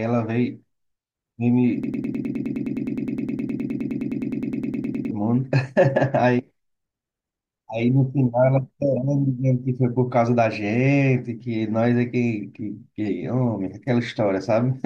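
From 1.84 s to 5.11 s the speech turns into a broken-record loop. A fragment about 0.10 s long plays again and again, back to back, 32 times. Each pass is identical, so the sound becomes a rapid, mechanical stutter at roughly ten repeats per second. The likely cause is a player or stream that stalled and kept resending the last piece it held. Whatever should have been heard in those three seconds is missing.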